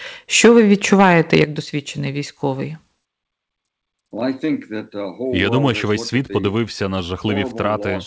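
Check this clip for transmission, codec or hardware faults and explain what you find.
Two related faults are audible early in the speech, both at the microphone end rather than in transmission. The call-codec path carries them through, with nothing above 8 kHz, a band limit that fits a G.722 wideband call.

From 0.44 to 1.44 s there is microphone overload. The input gain is likely set too high, so peaks drive about 9 dB past the converter's full scale, and a few percent of samples are flattened at the ceiling. Squaring off those waveform tops adds odd harmonics that were never in the signal, heard as a harsh, gritty crackle riding on the loudest syllables, ending just before "досвідчений військовий".

At 1.44 s the microphone volume steps down by about 7 dB in a single jump, with both the voice and the room noise dropping together just before "досвідчений військовий". The cause is likely the call software's automatic gain control detecting the clipped peaks and cutting the device's input level in one move. 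The speech after the step sounds noticeably quieter than before, with no gradual fade.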